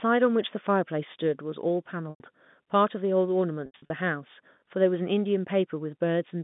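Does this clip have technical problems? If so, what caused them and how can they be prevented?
Yes. Packet loss with pitch repetition occurs twice. From 2.1 to 2.2 s, about 100 ms of audio goes missing, which fits five 20 ms packets. From 3.66 to 3.90 s, 160 ms is lost in pieces spread over 240 ms, with the longest run at 80 ms. In each gap the receiver fills the hole by repeating the last pitch period, which gives a held, buzzy tone. That tone fades away over about 50 ms, leaving silence until the sound returns with a brief cross-fade. Underneath, the G.711 telephone coding carries the 150 Hz to 3.6 kHz line band with at most faint added damage. To prevent the dropouts, give the call a stable, prioritised network path (QoS, wired rather than congested Wi-Fi) and enable forward error correction or redundant packets so lost frames can be recovered instead of concealed.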